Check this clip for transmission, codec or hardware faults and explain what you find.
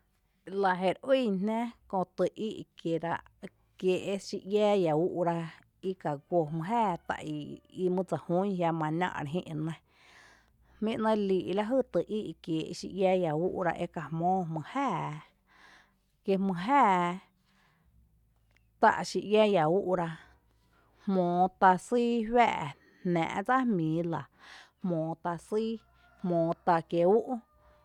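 No faults heard anywhere in the recording, so there is nothing to flag.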